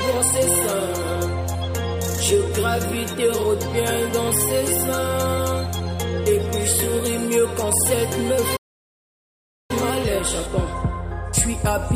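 At 8.56 s the sound cuts out mid-flow and stays silent until 9.71 s, a gap of about 1.13 s. This is a playback stall. The likely cause is a player that ran short of data or was blocked before recovering.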